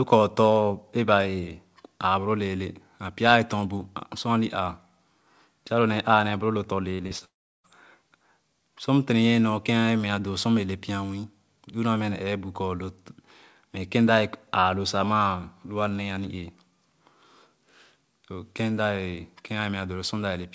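Just after "nee boro lu tɔ̃", at 6.94 to 7.01 s, a burst of packet loss interrupts the speech. The receiver had nothing to play for about 50 ms and extended the last sound, so a held buzz or fading hiss stands in where the speech should continue. Playback then resumes roughly 40 ms further on, so the stretch in between is skipped rather than delayed.

Two short concealed packet losses follow closely, at 7.07 to 7.13 s and 7.19 to 7.23 s. In each, a few hundredths of a second never reached the decoder in time. The gap was bridged by continuing the preceding sound for about 37 ms and then 20 ms before blending back into real audio. Each is heard as a brief smear or wobble, and about 40 ms and 20 ms of speech respectively are lost.

From 7.25 to 7.66 s comes a long network dropout. The last sound is drawn out as a fading buzz or hiss, and for most of those roughly 0.4 s only silence remains, about 350 ms of it. 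The cause is likely an interruption in packet delivery lasting a few tenths of a second. When the speech returns it has moved on by about 400 ms.

The band stops at 8 kHz throughout, which fits a wideband call codec such as G.722.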